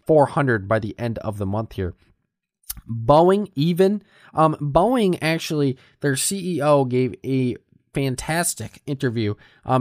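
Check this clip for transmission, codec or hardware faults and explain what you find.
No transmission, codec or hardware faults turn up anywhere in this clip.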